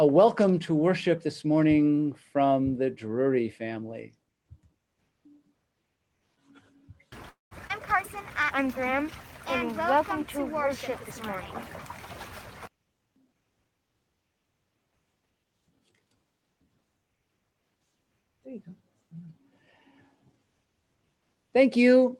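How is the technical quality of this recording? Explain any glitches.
The recording has four clear transport glitches, all typical of packet-based call audio, concentrated between 7.29 s and 13.95 s.

From 7.29 s to 7.53 s there is a call audio freeze. The sound stops moving forward, and the last instant is drawn out briefly before decaying into about 160 ms of silence. When playback resumes it continues from exactly where it stopped, with nothing lost. About 218 ms of filler were inserted, and the overall delay grows by that amount. This is the signature of a stall, likely from packets held up in transit until the jitter buffer ran dry.

Shortly after, at 7.67 s to 7.71 s, a skip ahead occurs. Playback jumps forward and drops roughly 70 ms of audio, joined across a short filler of about 23 ms. Newer audio was already queued when the older stretch was dropped. This trims the accumulated delay by roughly 50 ms. 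It is audible as an abrupt splice where a small piece of the sound simply goes missing.

From 8.18 s to 9.04 s a jitter buffer slow-down runs at 95% speed. The receiver repeated short pitch-period-sized segments many times over that stretch, adding 44 ms in total to rebuild its reserve. Pitch stays unchanged, but the sound is slightly stretched and sluggish, with sustained portions drawn out.

From 12.69 s to 13.95 s the opposite happens: a jitter buffer speed-up at 117%. The buffer was holding more audio than its target, so the receiver cut out many short pieces, roughly 200 ms altogether, to pull the delay back down. Pitch is preserved, but the passage plays noticeably faster and sounds hurried, with transitions slightly compressed.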